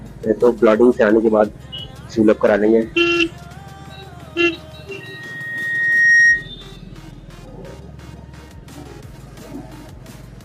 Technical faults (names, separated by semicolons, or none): loudspeaker feedback squeal